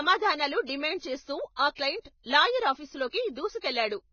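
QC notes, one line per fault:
Throughout: Vorbis compression, likely. The speech sounds hissy and grainy, with nothing above 6.6 kHz, and the damage fits a very low bitrate near 17 kbps. A spectrogram shows a hard ceiling and speckled, blotchy treble where coarse quantisation turned detail into noise.
0.66–0.69 s, 1.56–1.59 s, 1.75–1.78 s, 2.23–2.26 s, 3.60–3.63 s: pre-echo, short hiss lasting 25 to 34 ms before sharp attacks. It occurs just before "డిమాండ్ చేస్తూ ఆ క్లయింట్", between "డిమాండ్ చేస్తూ ఆ" and "క్లయింట్ లాయర్", and after "డిమాండ్ చేస్తూ ఆ క్లయింట్". Block-wide quantisation noise leaks backward, so waveforms show fuzz preceding each onset and spectrograms show a smeared vertical haze.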